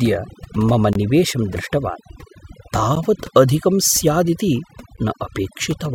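From start to finish, overdone noise removal leaves near-silent, twinkling gaps between the speech; the spectrogram shows scattered isolated specks against black, with weak harmonics carved away. Gaps at joins of encoded pieces fall at 0.93 to 0.95 s (23 ms), 2.95 s and 4.97 s (11 ms each), every 2.0 s: encoder delay and padding leave brief dropouts, seen as narrow notches or dips in the spectrogram and waveform.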